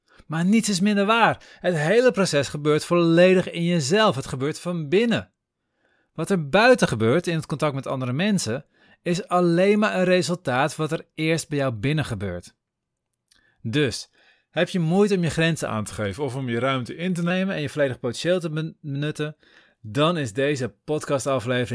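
From 15.67 to 17.31 s, between "moeite om je grenzen" and "en je volledig potentieel", the speech drops about 1.5 semitones and slows to 0.92× speed. This is a wrong sample rate, which fits 24 kHz audio played back at 22 kHz without conversion.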